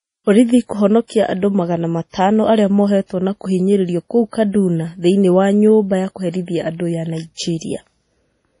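Throughout, the speech sounds watery and swirly, with nothing above 10.6 kHz. The likely cause is heavy MP3 compression, which fits a low bitrate near 32 kbps. From 1.08 to 1.10 s, pre-echo appears: a short hiss lasting 23 ms comes just before "andũ magana matano arĩa". Codec noise has spread back ahead of the sharp onset, so that attack sounds smeared.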